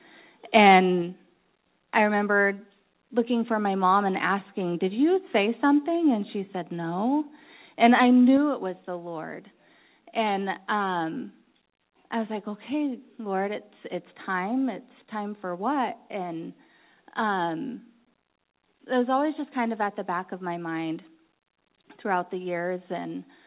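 The microphone volume was likely stepped down by the call software's input-level control, twice in this speech recording. At 1.02 s the level drops by about 3 dB, and at 8.37 s, just before "it was the", it drops by about 4 dB. Each change happens in a single step, so voice and background fall together abruptly rather than fading, and the lower level carries on afterwards. The call path passes nothing above 4 kHz, consistent with G.711 telephone-band coding.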